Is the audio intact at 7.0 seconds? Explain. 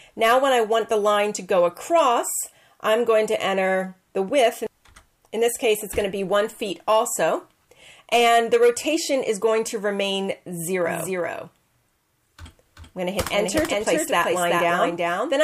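Yes, at 7.0 seconds the audio plays through cleanly with no dropout, click, distortion or other fault.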